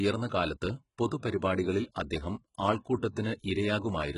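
From start to finish the speech carries HE-AAC compression artefacts. Treble is present right up to a hard ceiling at 11.1 kHz, but it sounds synthetic. The s sounds come out gritty and metallic. The damage is heavy and fits a bitrate near 12 kbps. Plain low-rate AAC or MP3 would simply muffle the top end. Here the treble stays bright but wrong, which points to the likely cause: upper bands rebuilt from copied lower ones whose harmonics no longer align.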